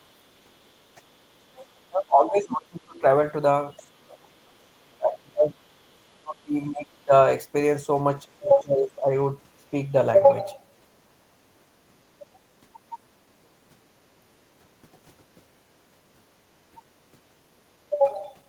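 At 1.56 to 1.65 s a faint second voice slips in underneath, roughly 25 dB below the talker. This is the other side's voice leaking through, likely because the echo canceller left some loudspeaker sound in the microphone signal. It is a brief scrap. On a spectrogram it appears as a weak patch of harmonic striations that does not line up with the main voice. In the waveform it is only a small ripple.

From 1.87 to 3.04 s, then 3.81 to 4.55 s, 4.81 to 5.57 s, 6.1 to 7.12 s and 8.36 to 9.12 s, the talker's level repeatedly sags. This is speech suppressed in double talk, likely caused by the canceller mistaking both sides talking at once for echo and turning everything down. The dips reach roughly 25 to 35 dB, deepest at 3.81 s, and each affects roughly 0.7 to 1 s of sound. The waveform shows sudden pinched sections in the envelope. The spectrogram shows the harmonics weakening across those stretches.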